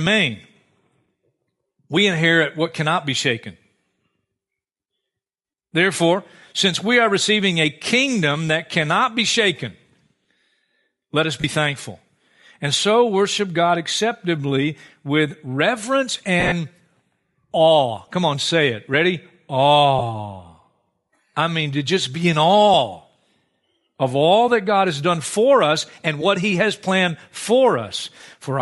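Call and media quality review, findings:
Bluetooth LC3 compression, whole clip: speech has a breathy, grainy upper edge, likely from LC3 coding, with sound consistent with 48 kbps and 10 ms frames. Noise-filled highs. Distinguishable from plain lowpass by the texture, not dullness.

Lost LE Audio frames, three dropouts: 11.41–11.44 s after "let us", 30 ms, fits three 10 ms frames; 16.40–16.52 s after "acceptably with reverence", 80 ms scattered over 120 ms, longest run around 40 ms; 19.99–20.02 s, 20 ms. Decoder concealment repeats the last spectrum with randomised phase, giving a brief noisy smear rather than a hard silence or a click. That separates it from a packet gap or a buffer underrun.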